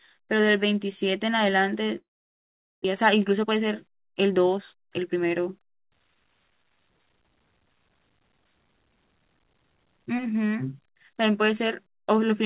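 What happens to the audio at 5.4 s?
At 5.4 s the speech is near the end of a jitter buffer speed-up running from 3.02 to 5.47 s. The receiver trims repeated pitch-period slices, about a third of a second in total, so it runs about 11% fast and sounds hurried, with pitch unchanged, unlike a resampling speed error.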